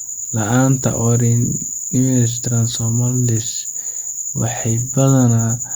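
Listening to the speech recording, nothing stood out as a technical problem at any point.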